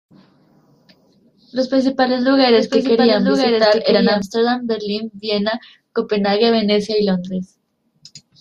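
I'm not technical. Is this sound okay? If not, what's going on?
No. A doubled audio track runs from 2.54 to 4.22 s: a second, slightly quieter copy of the speech plays about a second behind, starting and stopping abruptly. This is likely a slower recording path or an edit capturing the same speech twice.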